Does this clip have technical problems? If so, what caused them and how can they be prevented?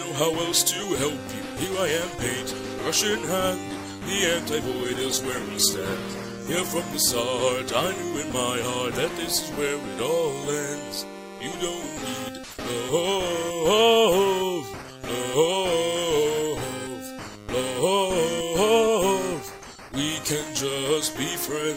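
Yes. From 4.73 s to 6.91 s the audio turns coarse and loses its high frequencies, then clears as the bitrate recovers. This is a call bitrate drop: the bandwidth estimate fell, so the encoder coded with far fewer bits, consistent with a fall from around 96 kbps to about 13 kbps for roughly 2 seconds. Keeping a stable connection with spare bandwidth, or setting a higher minimum encoder bitrate, would prevent it.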